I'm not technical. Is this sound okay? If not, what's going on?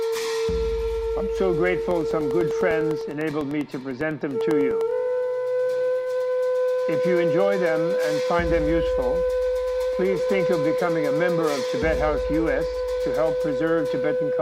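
No. Between about 1.91 and 4.91 seconds there are periodic USB or driver dropouts: ten tiny ticks per second, one every 0.1 s, roughly thirty in all. Something in the computer is briefly interrupting the connection to the audio device on a fixed schedule. Each time, about a thousandth of a second of sound goes missing and is replaced by silence. That tiny gap is what you hear as a steady ticking over the audio.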